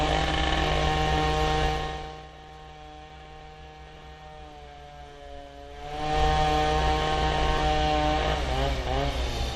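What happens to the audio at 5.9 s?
At 5.9 s the sound is in the middle of a burst of zipper noise that runs from 5.68 to 6.19 s. The level changes by about 20 dB in hard 1 dB jumps, around fifty per second, with no smoothing between them, so each jump clicks and the run of clicks becomes a fast ticking zip. On a waveform the envelope moves as a staircase, and a spectrogram shows faint vertical broadband lines at each step.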